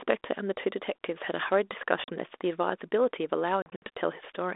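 Packet loss on an ADPCM call at 2.04 to 2.10 s drops about 40 ms, a couple of packets, into hard-edged silence. The decoder's adaptive predictor and step size fall out of step with the sender's, so the speech comes back with brief distortion. A second loss from 3.62 to 3.83 s scatters 120 ms of gaps over about 200 ms, the longest lasting 60 ms, and produces repeated choppy dropouts with the same mistracked returns.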